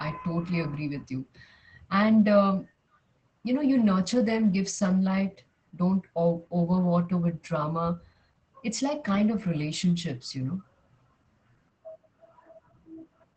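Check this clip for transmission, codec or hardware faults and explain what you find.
There's one fault, and it runs through the whole speech clip: Opus voice compression. Nothing comes through above about 8.7 kHz, which points to a wideband SILK coder at a low rate, around 12 kbps. The narrowed band and coarse excitation coding leave the voice audibly muffled, a bit hoarse and faintly robotic.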